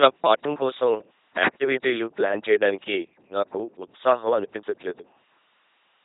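Throughout, the speech has passed through an LPC-10 vocoder, with the heavy, buzzy coding that fits a 2.4 kbit/s rate. A ten-pole filter excited by either pulses or noise replaces the real voice, so it sounds robotic and mechanical, with stray buzz and hiss and nothing above 3.8 kHz.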